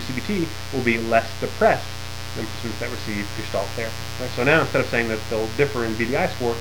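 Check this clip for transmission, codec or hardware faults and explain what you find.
Mains buzz runs throughout the clip, a steady raspy buzz from switching spikes on 60 Hz power, harmonics reaching kilohertz, roughly 10 dB below the signal.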